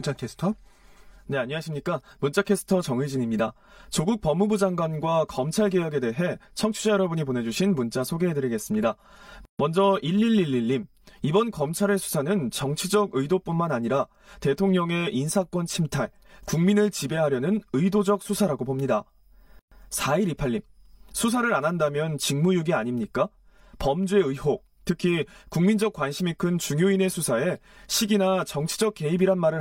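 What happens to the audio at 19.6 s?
At 19.59 s a gap at a join of encoded pieces cuts in. Two separately encoded segments were butted together without trimming, so the encoder's start-up delay and the padding of the previous segment's last frame both stayed in the stream. The speech stops dead for about 124 ms, until 19.72 s, with smeared edges, then resumes exactly where it left off. The same break recurs every 10 s.

Underneath, a channel delay (comb filtering) colours this moment as it does the whole clip. One channel runs late by roughly 5 ms before the two are summed to mono, so shared content cancels at evenly spaced frequencies starting near 100 Hz. Those fixed notches leave the speech around the gap sounding hollow and phasey.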